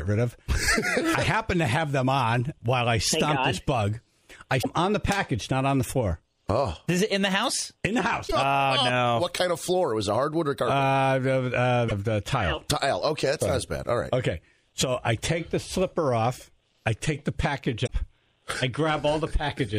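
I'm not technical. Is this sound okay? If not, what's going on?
No. There is damaged data in a compressed stream: four short chirps, squawks, clicks or brief holes, at 4.59 to 4.66, 8.24 to 8.33, 11.85 to 11.92 and 17.83 to 17.90 seconds. Part of the stored file was corrupted, so the player misreads those bits, briefly loses its place and finds it again.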